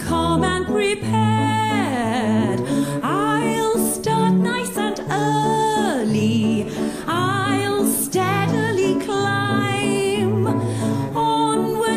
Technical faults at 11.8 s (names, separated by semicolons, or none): none